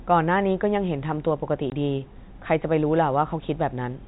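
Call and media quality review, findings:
Packet loss filled with silence, 1.7 s: 20 ms dropout in the speech, hard edges. Receiver side; fits one lost 20 ms packet played as silence. Waveform: flat gap. Spectrogram: blank vertical stripe, under G.711's 4 kHz ceiling.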